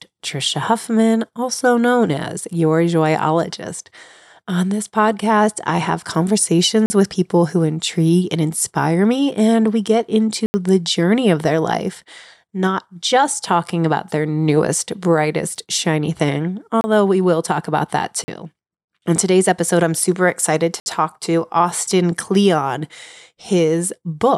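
Five blocks of digital silence, probably from an output buffer that went unfilled: 6.86 s (40 ms, before "with people who intrigue"), 10.46 s (80 ms, between "me and we get" and "the journey of their"), 16.81 s (30 ms), 18.24 s (40 ms, after "will talk about that") and 20.8 s (60 ms).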